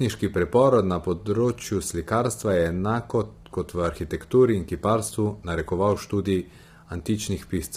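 From start to finish the speech sounds rough and grainy, with a hiss filling the gaps between harmonics and a thin, synthetic upper band. This is likely low-delay AAC compression: AAC-ELD's short frames blur pitch detail, and the heavy damage fits a low bitrate near 24 kbps.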